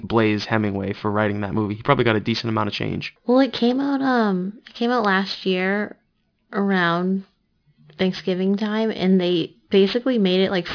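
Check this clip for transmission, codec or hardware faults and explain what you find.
Aliasing runs through the whole clip. The speech was brought down to a much lower sample rate without an anti-aliasing filter. The fold point sits at 5.5 kHz, which fits a new rate of 11 kHz. Energy above that point folds back as wrong, unrelated frequencies, some 20 dB below the speech. Sibilants turn gritty and metallic. On a spectrogram, content runs hard up to the 5.5 kHz edge, with mirrored, downward-bending ghost traces where higher components fold back.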